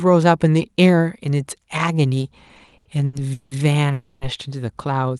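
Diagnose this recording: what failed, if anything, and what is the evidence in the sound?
Repeated stalls (stutter) from the network and jitter buffer, between 2.47 and 3.53 s: seven brief holds where the last sound is stretched, the longest 180 ms, filling about 40% of that stretch. Nothing is skipped, so the audio drags rather than jumping as packet loss would.

A call audio freeze from 3.93 to 4.23 s: one continued, fading buzz lasting 280 ms, never reaching silence, after which the audio resumes exactly where it stopped. A single long network hold-up likely caused it, unlike the stutter's many short stalls. The audio went through the Opus path, band-limited near 12 kHz.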